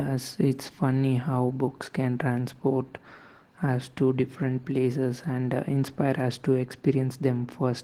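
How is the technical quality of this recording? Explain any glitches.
The speech is noticeably degraded by low-bitrate codec damage that runs through the whole clip.

Opus voice compression, throughout: a SILK layer codes the speech coarsely, with a sparse CELT layer above 8 kHz. This leaves audible roughness and a slightly synthetic edge, consistent with about 16 kbps.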